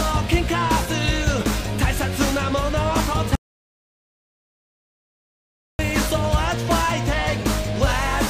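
At 3.35 s the sound cuts off abruptly into an audio dropout to silence lasting about 2.44 s, until 5.79 s. The gap is silent with no room tone, unlike a quiet pause, which points to a likely lost input while recording continued.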